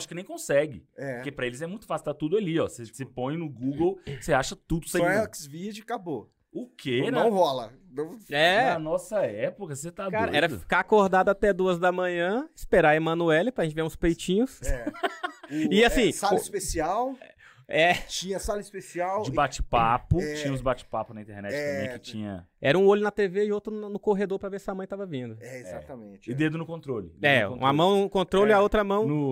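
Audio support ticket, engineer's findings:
Damaged data in a compressed stream at 4.99 s: brief glitch where corrupted frames are misread or dropped; decoder loses sync, then resumes at the next valid frame header.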